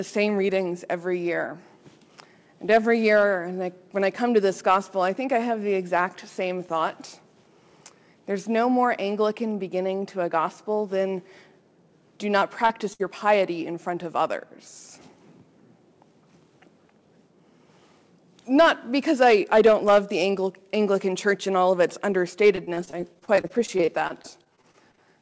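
A brief smear, a wobble where the sound seems to hold for an instant, comes at 12.40 to 12.43 s and again at 12.67 to 12.71 s. These are short concealed packet losses. Each time about 20 ms of audio failed to arrive in time, and the receiver bridged the hole by extending the last sound for 15 to 20 ms before blending back into the real signal.

Right after, from 12.93 to 13.01 s, the sound stalls into a held, fading continuation and then jumps ahead. This is a burst of packet loss. Roughly 60 ms went missing in one run. The receiver kept the last sound going and let it die away, so the audio resumes with that stretch gone.

From 22.55 to 24.99 s the sound turns choppy, with small pieces dropping out throughout. This is repeated packet loss with the familiar robotic sound. About two dozen gaps follow one another, none longer than 24 ms, and together they make up about 460 ms. Concealment covers about 18% of the stretch. 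Nothing is heard above 8 kHz, which fits a G.722 call path at 64 kbps.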